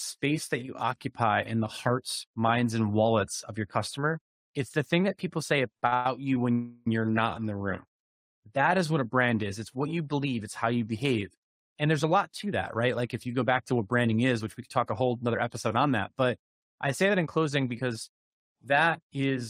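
Just after "thing that people say", two short stalls from a late packet occur at 5.77 to 5.83 s and 5.87 to 5.93 s. The receiver held the last sound for about 45 ms and then 50 ms until each packet arrived, then resumed without losing anything. The result is a brief drawn-out stretch with a faint buzz or dip, not a skip.

Two call audio freezes follow, from 5.94 to 6.06 s and from 6.52 to 6.87 s, the second ending right before "you're not in the". These are longer than the stalls, at 113 ms and 343 ms. The frozen sound turns into a fading buzzy hiss rather than silence, likely because the jitter buffer ran dry while packets were held up. Again nothing is missing; the audio is simply delayed.

A jitter buffer speed-up runs from 11.50 to 16.01 s at 107% speed, trimming roughly 300 ms. A second follows "I say", from 17.09 to 18.09 s at 108%, trimming about a tenth of a second. The speech sounds hurried but keeps its pitch, because whole pitch periods are removed rather than the audio being resampled.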